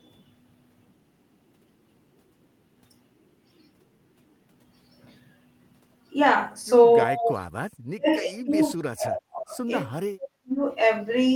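Speech suppressed in double talk at 7.06–7.47, 7.83–9.58, 9.82–9.87 and 10.05–10.62 s: the speech is ducked by up to roughly 40 dB, likely echo-canceller gating.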